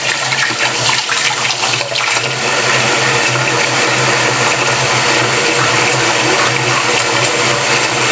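All the way through, there's gain pumping: the gain swings by around ten decibels, leaving everything squashed. The likely cause is input gain set far too high, with a fast limiter clamping down. The call's high-pass and 8 kHz top end are normal.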